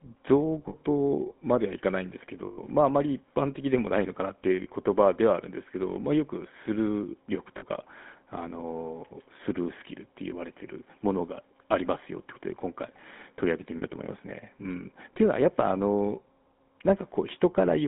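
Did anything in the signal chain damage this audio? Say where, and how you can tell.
Yes. Throughout the clip the speech has a buzzy, gravelly roughness, and the band is confined to roughly 200 Hz to 3.5 kHz. That points to the codec stage, specifically the GSM full-rate codec at a rate consistent with 13 kbit/s. It models the vocal tract and drives it with a coarse, regularly spaced pulse excitation, so the fine detail of the voice is replaced by that grainy texture. The damage is plainly audible.

The network stage adds lost GSM frames at 0.68 s (60 ms), 2.46 s (120 ms), 4.64 s (20 ms), 7.58 s (40 ms) and 13.78 s (40 ms). At each point the sound freezes into a brief rough, metallic ring instead of continuing naturally. The decoder is concealing missing frames by repeating the last good frame's parameters with falling gain. The 120 ms gap at 2.46 s is the longest.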